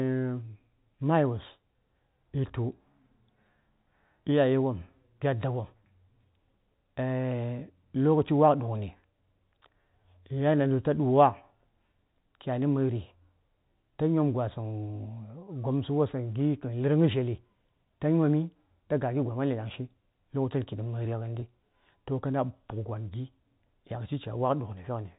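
At 21.40 to 21.42 s the speech briefly holds and turns slightly buzzy before carrying on. This is packet loss with pitch repetition: about 20 ms of audio went missing, which fits one dropped packet, and the receiver filled the gap by repeating the last pitch period.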